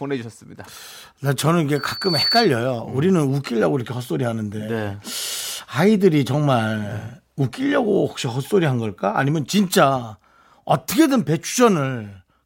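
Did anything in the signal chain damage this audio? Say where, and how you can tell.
Yes. Loudspeaker feedback squeal in the playback loop, 1.75 to 2.53 s: the microphone re-amplifies its own speaker at 4.5 kHz, swelling within half a second to about 5 dB above the speech.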